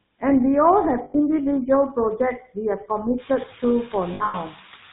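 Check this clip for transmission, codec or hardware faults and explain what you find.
Yes, there's a fair bit going on: a noise suppressor, a GSM full-rate codec throughout, and two patches of lost GSM frames.

Noise suppressor artifacts run through the whole clip. It pulls down the bands it judges to be steady noise, frame by frame, but only by about 4 dB. So the background dips between phrases and comes back under the speech.

The GSM full-rate codec is also there from start to finish, and it's plainly audible. The sound fits a 13 kbps GSM full-rate stream. Everything above 4 kHz is gone, and the pulse-driven excitation gives the speech that buzzy, gravelly edge.

Lost GSM frames show up twice. The first is from 1.04 to 1.15 s, about 100 ms. The second is scattered across roughly 200 ms between 4.14 and 4.35 s, with the longest gap around a tenth of a second. Each time the decoder repeats the last good frame, so you hear a short rough, metallic ring.

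The room noise steps up by about 15 dB around 3 s but stays about 20 dB under the speech. That's the recording space, not a fault.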